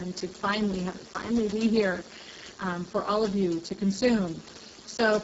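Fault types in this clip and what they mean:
Speex codec: Speech sounds hoarse, buzzy and close to robotic, with the band above 4 kHz reduced to a hiss-like fill and nothing above 7.7 kHz. This CELP codec had too few bits for the excitation, which fits a very low setting near 6 kbps.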